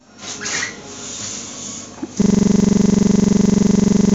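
Speech clip with a system hang loop from 2.22 s to the end: one 42.7 ms slice, fitting a 2048-sample buffer, repeats exactly, buzzing at 23.4 Hz rather than fading like packet-loss concealment.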